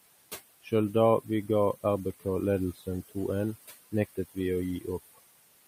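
Throughout the clip, noise suppressor artifacts come from the suppressor pulling the room noise, which sits about 16 dB below the speech, down by about 19 dB frame by frame. The leftover background sinks between phrases and rises under the speech. From 0.63 to 0.72 s and again from 2.75 to 2.87 s, the suppressor mistakes part of the speech for noise and cuts it, by about 16 dB and about 13 dB. Each brief stretch sounds swallowed and faint.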